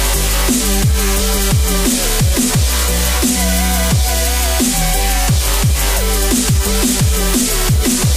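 No technical faults can be heard anywhere in this audio.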